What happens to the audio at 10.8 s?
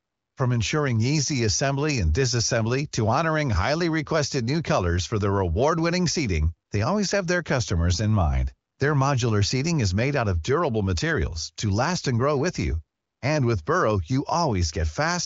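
Nothing goes wrong at 10.8 s: the speech passes through intact, carried cleanly by the AMR wideband (HD Voice) codec.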